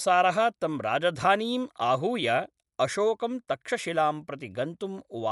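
Throughout, the speech is dull, with nothing above 11.4 kHz and a rough, fluttering noise around voiced tones. This is likely Dolby Digital compression at a low bitrate, consistent with 64 kbps, where the encoder narrows the band and the decoder fills starved frequency lines with dither noise.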